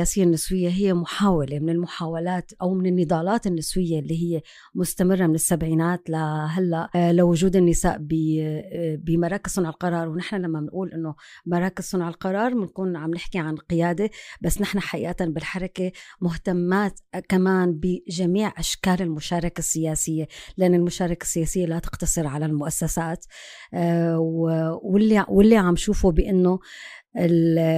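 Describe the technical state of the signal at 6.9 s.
At 6.95 s there is damaged data in the compressed stream: corrupted bytes make the decoder misread a frame and lose sync until the next header, producing a brief glitch such as a chirp, squawk, click or short hole.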